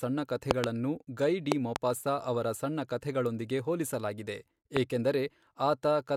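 It's a speech clip with five loud pops laid over the voice, which carries on underneath each one. There's a double pop between 0.51 and 0.66 s, roughly 25 dB above the speech, another pair from 1.52 to 1.78 s, and a single one from 4.77 to 4.79 s, those last two each about 20 dB up. They're likely voltage spikes from a plug, switch, static or driver glitch, shaped into a sharp thump by the downstream circuitry.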